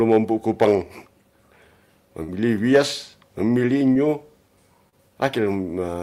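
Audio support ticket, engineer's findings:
Hard clipping, 0.10–0.17 s, 0.62–0.73 s and 2.76 s: a gain or converter stage is overdriven by about 4 dB, about 6 dB and about 4 dB, so speech peaks are cut flat. The flat tops add high harmonics, heard as crackle on the loudest syllables.

Burst of packet loss, 2.23–2.29 s: consecutive packets arrived too late or never on the network path. The receiver extended the last sound for 46 ms while fading it, giving a held buzz or dying hiss. Speech then resumes with roughly 50 ms missing.

Short concealed packet loss, 3.93–3.96 s and 4.89–4.93 s: single brief gaps in delivery to the decoder, about 20 ms and 30 ms lost. Concealment filled them by continuing the preceding pitch or noise, then blended back. The result is a brief smear or wobble, and short consonants can drop out.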